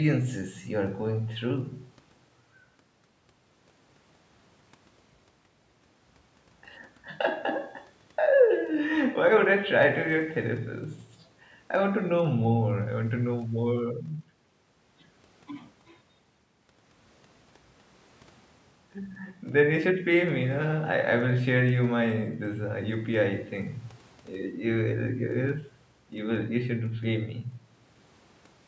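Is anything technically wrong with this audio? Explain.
No, nothing's wrong here; it's speech that went through a call's microphone processing, so the lowest bass is trimmed and there's nothing above 8 kHz, which is just how that path normally sounds.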